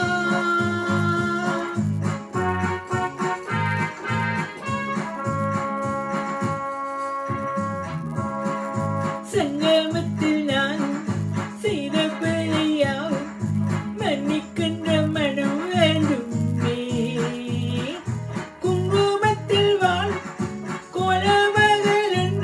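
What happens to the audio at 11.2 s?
At 11.2 s, as throughout the clip, the resampler restarted on every block. Each 10 ms block was converted on its own, so its edges lack real neighbouring samples. The resulting edge errors repeat at 100 Hz, heard as a buzz that sounds only while signal is present, consistent with a 48 kHz to 24 kHz conversion.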